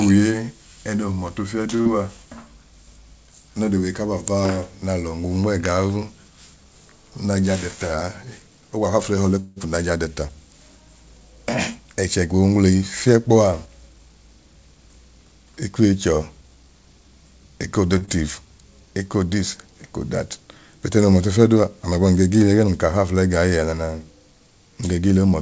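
At 1.76 to 1.81 s a sound is held a beat too long, with a faint buzzy sustain. This is a short stall from a late packet. The jitter buffer ran dry when a packet failed to arrive on time, so the receiver stretched the last sound by about 35 ms and then resumed exactly where it left off. Nothing is lost, but that stretch of speech now sits 35 ms later. The same held, slightly buzzy moment recurs at 17.98 to 18.03 s, this time a 33 ms stretch.

Right after the first stall, from 1.81 to 1.87 s, there is a brief smear where the speech wobbles before settling. This is short concealed packet loss. About 40 ms of audio never reached the decoder, and the receiver filled the gap by extending the preceding sound, then blending back into real audio. Whatever was in those 40 ms is gone. A smaller version follows at 18.05 to 18.09 s, where roughly 20 ms was lost and patched over.

From 7.96 to 8.79 s the speech runs slightly fast without any change in pitch, sounding a little hurried. 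This is jitter buffer speed-up. Too much audio had built up in the buffer, so the receiver trimmed many tiny pitch-period-sized slices, playing at about 106% speed and removing roughly a twentieth of a second. It happens again over a longer stretch, 13.28 to 16.64 s, at about 105%, shaving off roughly 150 ms.

At 9.40 to 9.58 s the audio turns into a fading buzz that drops briefly to silence, about 20 ms of it, before speech resumes. This is a call audio freeze, likely caused by packets being held up in transit so that the jitter buffer emptied. The receiver carried the last sound forward for about 167 ms while it waited, then continued from the same point. Little or nothing is missing, but a gap has been inserted.

Throughout the clip, the G.722 call path leaves nothing above 8 kHz.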